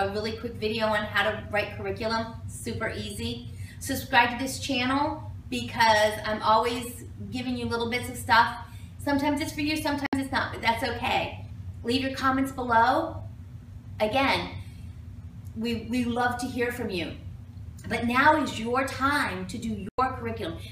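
At 10.06 s the sound cuts out for about 64 ms, and again at 19.89 s for about 96 ms. That's a digital broadcast dropout: the receiver muted on failed frames, so those gaps fit two and three lost frames respectively, and that audio is simply gone.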